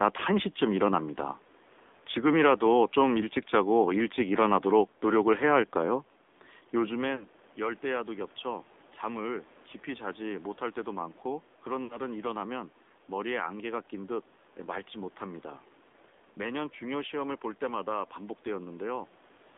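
Speech sent through the AMR narrowband mobile codec at a low rate, which fits about 7.4 kbps, is confined to 250 Hz to 3.6 kHz and sounds buzzy and synthetic throughout. Lost AMR speech frames from radio errors make the decoder stretch its last settings with falling gain, so the sound smears and dips briefly at 7.16 to 7.25 s and 11.84 to 11.97 s, gaps of about 40 and 60 ms.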